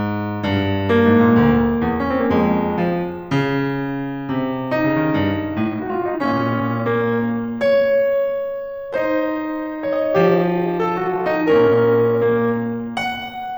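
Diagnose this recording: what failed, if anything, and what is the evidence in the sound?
From 5.58 s the music drops to 0.69x pace at unchanged pitch: likely a software time-stretched section. A slow clock would lower the pitch.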